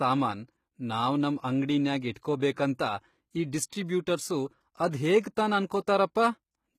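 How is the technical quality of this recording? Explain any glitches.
The recording has plainly audible codec damage throughout and one short pre-echo.

Across the whole clip, the treble sounds synthetic: s sounds come out gritty and lispy, and nothing is present above about 14.9 kHz. This is likely HE-AAC compression, which codes only the lower spectrum and regenerates the top band by copying lower bands upward under a coarse envelope. The rebuilt harmonics don't align with the real ones, and the degree of damage fits a bitrate around 20 kbps.

From 2.13 to 2.16 s, a hiss runs for about 35 ms ahead of a sharp onset, and the onset itself sounds softened. This is pre-echo. The transform codec spreads quantisation noise evenly across each block, so when an attack lands late in a block, noise sized for the loud part also fills the quiet stretch before it, smearing the attack backward in time.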